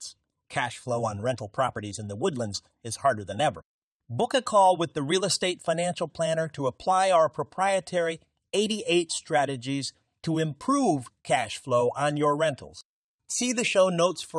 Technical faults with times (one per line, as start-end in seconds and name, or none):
0.14-14.29 clock slip clicks